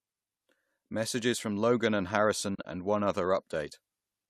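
Speech, with AAC frame loss with muting between 2.55 and 2.65 s: short soft-edged dropouts totalling 70 ms over 100 ms, the longest around 40 ms, seen as faded vertical gaps in the spectrogram, over a light coding texture likely from low-delay AAC.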